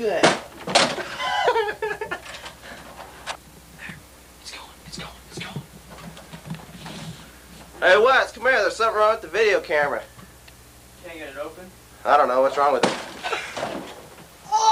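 Nothing goes wrong anywhere in the clip, and there's no technical fault to point to at any moment.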